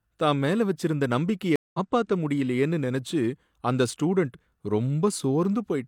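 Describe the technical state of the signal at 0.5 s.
At 0.5 s the signal is intact, with no audible fault at that point in the speech.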